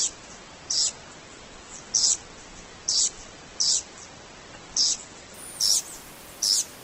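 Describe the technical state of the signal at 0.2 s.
At 0.2 s the signal sits inside an adaptive stream starting at a low bitrate, a condition that runs from 0.0 to 5.34 s. The player began on a cheap rendition to get playback going quickly, then switched up once its throughput estimate settled. Here the audio has nothing above 8.2 kHz and heavier codec artefacts, consistent with Opus at roughly 12 kbit/s. At 5.34 s the quality jumps abruptly, with no gap, to a fuller band that fits 64 kbit/s.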